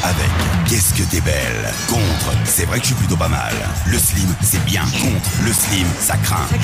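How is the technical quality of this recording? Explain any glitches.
The recording has one clear fault, a burst of CD scratch ticks near the end.

From 4.65 s to 6.14 s there are nine small clicks, about six per second, each at most around 10 ms. A scratch on the disc corrupted more data than error correction could rebuild, once per revolution, so the player interpolated or muted the damaged samples. It sounds like a regular ticking of uneven strength. On a spectrogram, evenly spaced thin vertical lines appear. The waveform shows brief notches or flattened spots.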